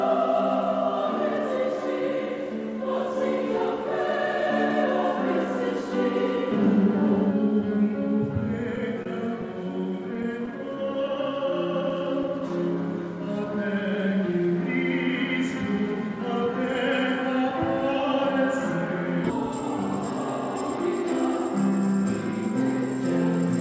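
From 8.76 to 10.49 s come scattered short gaps: about seven lost or late packets, each patched by stretching the preceding sound, filling roughly 70 ms in all, the longest around 30 ms. They come through as brief ticks and smears, visible as small smeared or repeated blocks on the spectrogram.

A jitter buffer slow-down follows from 10.51 to 12.50 s. To rebuild its reserve, the receiver repeated single pitch periods, adding 85 ms and running at 96% speed with pitch unchanged. Sounds drag slightly, and the waveform shows near-identical cycles repeated side by side.

Between 14.77 and 16.48 s a jitter buffer speed-up trims roughly 70 ms by cutting out short pitch-period pieces, so playback runs at 104% at the same pitch. On the spectrogram, harmonics stay level while events arrive slightly closer together, with nothing above 8 kHz throughout.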